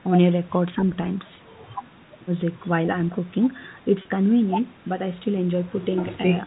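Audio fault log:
4.02–4.05 s, packet loss with pitch repetition: a 30 ms gap, likely one lost packet, bridged by repeating the last pitch period, so it sounds like a brief held, buzzy blip.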